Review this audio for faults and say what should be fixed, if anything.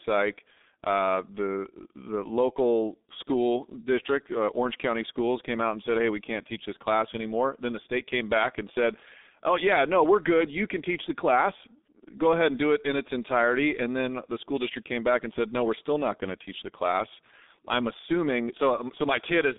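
The G.723.1 codec degrades the speech for its whole length. Nothing reaches above 3.8 kHz and the line band runs from about 250 Hz to 3.7 kHz, so the sound is muffled and thin. The heavy coding damage, consistent with a bitrate near 6.3 kbit/s, leaves the voice hoarse and the consonants smeared, because the codec's slowly updated voice model cannot follow rapid changes. To prevent this, carry the call on a wideband codec at a higher bitrate instead of G.723.1.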